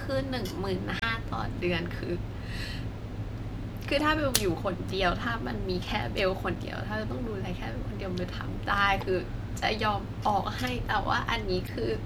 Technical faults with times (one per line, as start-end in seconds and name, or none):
0.98-1.03 damaged data in a compressed stream
3.99 damaged data in a compressed stream
6.55 damaged data in a compressed stream
9.00-9.03 damaged data in a compressed stream
11.66-11.69 damaged data in a compressed stream